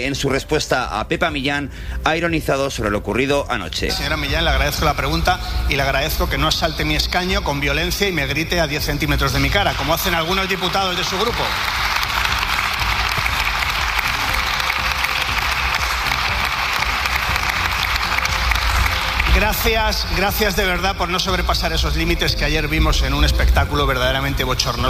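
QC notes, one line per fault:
No faults detected anywhere in the clip.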